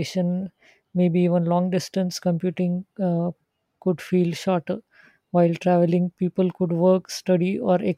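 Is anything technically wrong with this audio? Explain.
No, no technical faults are audible.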